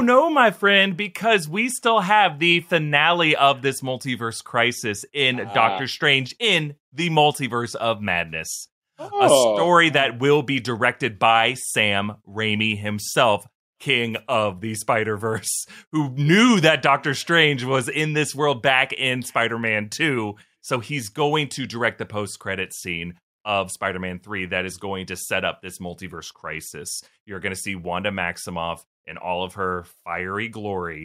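Listening through the speech recording, nothing stood out as a technical fault at any point.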